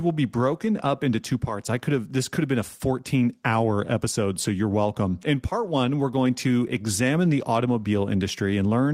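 No technical faults are audible.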